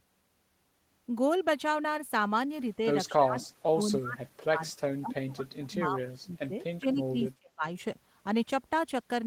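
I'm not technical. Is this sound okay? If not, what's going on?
No. From about 3.08 to 7.64 seconds the speech keeps sinking, at its worst becoming nearly silent, and sounds patchy for roughly four seconds in total. This is speech suppressed in double talk. The likely cause is that the other person on the call was talking at the same moment, and the call software, unable to tell this voice apart from the loudspeaker's sound, turned everything down together.

Inside that stretch, from 3.42 to 3.46 seconds, a faint, brief copy of the voice slips through, arriving about 0.23 seconds after the original. This is an echo leak. Someone is likely using a speakerphone, and their echo cancelling didn't fully remove what their microphone picked up from their own loudspeaker, so a scrap of it was sent back down the line.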